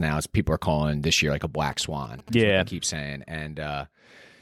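Right after "this year like a", at 1.72 s, you get a burst of GSM signalling interference that runs to 2.30 s, just before "yeah keep saying". It's that galloping dit-dit-dit of short buzzes at about 217 Hz, sitting roughly 20 dB under the speech. A nearby 2G phone is firing off short radio bursts while it signals the network, and the audio circuit rectifies them into audible buzz.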